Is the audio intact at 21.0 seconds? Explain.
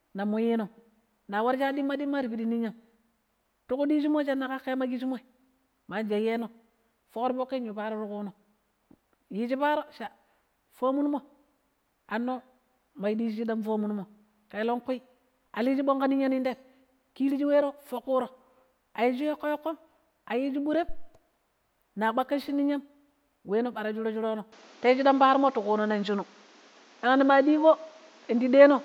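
No. At 21.0 seconds the speech is hit by a phantom power thump, running from about 20.89 to 21.10 s. A supply on the live microphone input was switched, and that sudden voltage step passed through the input's coupling capacitors as a single low-frequency pulse. It is heard as a deep, dull thump, which dies away quickly, decaying in about 47 ms rather than lingering.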